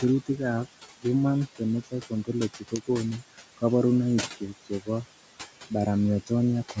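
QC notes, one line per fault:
Throughout: noise suppressor artifacts. The suppressor pulls down the bands it judges to be steady noise frame by frame, by about 17 dB, so the room noise sinks in the gaps and swells back under the speech. On a spectrogram the noise floor pumps between pauses and speech. The room noise, about 14 dB under the speech, is the bed being processed, and the upper edge sits cleanly at 8 kHz.
2.55–2.89 s: speech cut by the noise suppressor. Here the suppressor mistook part of the speech for background and turned it down along with the noise, by up to about 15 dB, over a total of roughly 150 ms within that span. The affected speech comes across swallowed and faint. The waveform shows a sudden dip in envelope, and the spectrogram shows the quieter speech energy there thinned out or missing, as if smeared into the noise floor.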